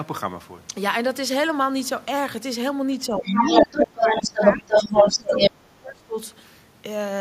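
From 3.09 s to 6.18 s the talker's speech is pulled down in level, at its deepest by roughly 25 dB. This is speech suppressed in double talk. It is likely that the echo canceller, unable to separate the near voice from the loudspeaker echo, attenuated both. Unlike a network dropout, the dips follow the other party's speech rather than landing at random.

Between 3.24 s and 5.51 s the other side's voice is leaking through, a second voice alongside the talker's, at roughly 10 dB relative to the speech. The echo canceller was likely leaving residual loudspeaker sound in the microphone. It differs from room reverberation because it is a separate voice, not a smeared tail of the talker's own.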